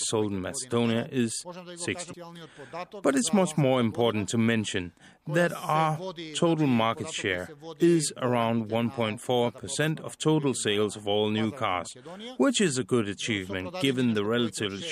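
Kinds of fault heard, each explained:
CD skip: A knock or a flaw threw the laser off its track, and it landed on a different turn of the disc's spiral. At 2.13 s the audio drops out for a few milliseconds, leaving a brief tick, then resumes from another point in the material. On the waveform this shows as a near-flat gap followed by an abrupt discontinuity; on a spectrogram, a thin vertical broadband line where the content before and after fails to join.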